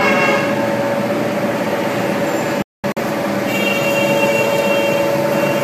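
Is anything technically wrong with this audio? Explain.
Yes. There is a digital broadcast dropout between 2.62 and 3.02 s. The sound fades out within about 3 ms and drops into silent holes across roughly 340 ms, the longest lasting 213 ms. The receiver muted on bad frames. That audio is lost, not delayed.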